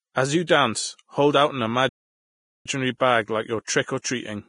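Throughout, the speech is hissy and grainy. The heavy damage likely comes from Vorbis compression at a low bitrate, around 28 kbps: treble detail is quantised into noise, unlike a plain low-pass filter, which would sound dull but clean.

Pre-echo first appears at 0.47 to 0.49 s, a short hiss spreading about 23 ms ahead of a sharp onset. The codec's block-wide noise has leaked into the quiet before the attack, which is why it arrives before the onset rather than trailing it like a reverb tail.

From 1.89 to 2.66 s a playback stall cuts the audio dead after "out an" for about 0.76 s, then resumes with "bag like you're". This is likely a player starved of data. It differs from a dropout because the sound picks up where it stopped rather than skipping ahead.

Pre-echo returns at 3.65 to 3.68 s, just after "bag like you're", with a smear of about 32 ms. It appears again at 4.02 to 4.04 s, over about 23 ms, blurring each attack.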